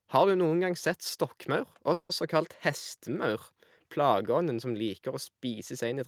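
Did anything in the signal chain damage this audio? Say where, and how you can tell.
Yes, a call audio freeze at the network stage, from 1.93 to 2.12 s. The last sound is stretched into a fading buzz that ends in near-silence. Speech then resumes exactly where it stopped, about 160 ms late. That distinguishes it from packet loss, which would drop sound. A stalled jitter buffer is the likely cause.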